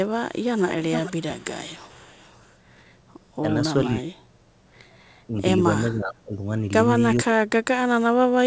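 Echo leak runs from 0.38 to 1.44 s and again from 1.67 to 2.57 s. A delayed copy of the speech trails the original by 443 ms. It is clearly audible in the first stretch, at roughly 10 dB below the speech, and only a faint trace in the second, around 30 dB down. The likely cause is a far-end loudspeaker whose sound reached its microphone and got past the echo canceller, so it was sent back down the line.

Speech suppressed in double talk comes next, at 3.84 to 4.11 s, 5.27 to 5.34 s and 5.91 to 6.45 s. The talker's level sags in pieces while the other side is speaking. The first dip is the deepest, about 35 dB, nearly cutting the speech out for around 0.2 s. The brief one at 5.3 s is only a slight dip of about 5 dB. The last loses about 15 dB over roughly 0.4 s. This is likely the echo canceller failing to separate the talker from the loudspeaker echo and attenuating both. Across the whole clip, the call path audibly carries nothing above 8 kHz.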